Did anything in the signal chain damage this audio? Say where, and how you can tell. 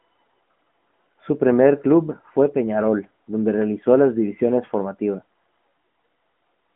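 No, no stage in the chain has damaged this speech. It carries the narrow telephone band of roughly 200 Hz to 3.4 kHz and the light coloration of the AMR narrowband mobile codec, which fits its 12.2 kbps mode.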